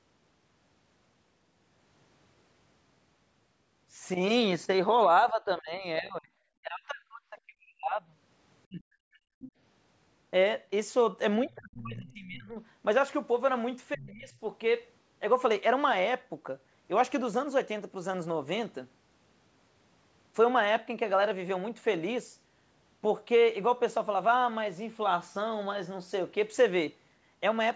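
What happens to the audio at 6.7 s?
At 6.7 s the talker is inside a stretch of speech suppressed in double talk, running from 6.6 to 7.95 s. The speech dips sharply and drops out in pieces, with the deepest cuts falling by about 40 dB. Together the cuts add up to roughly a second. The likely cause is both sides talking at once. The echo canceller could not tell the talker apart from the loudspeaker echo, so it turned both down.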